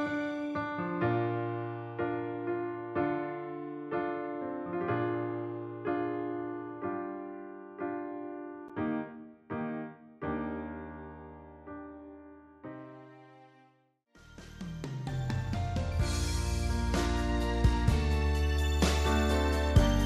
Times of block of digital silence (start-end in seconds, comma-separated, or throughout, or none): 8.68